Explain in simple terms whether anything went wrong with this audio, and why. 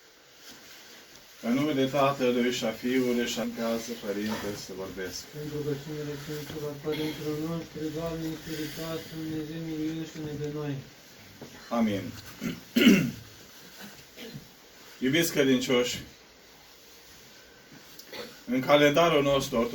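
Stream segment skipped, at 3.43 to 3.46 s: the sound jumps abruptly ahead with a brief blip. The likely cause is that one chunk of the streamed audio failed to arrive, so the player skipped it and went straight on to the next.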